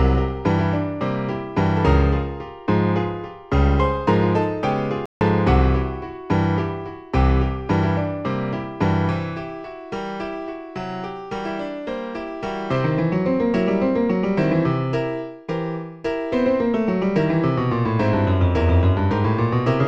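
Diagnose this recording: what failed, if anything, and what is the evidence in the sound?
At 5.06 s the sound drops abruptly into silence mid-flow and resumes at 5.21 s, a gap of about 154 ms. This is a playback stall, likely the player running short of buffered data or its output thread being blocked until it recovered.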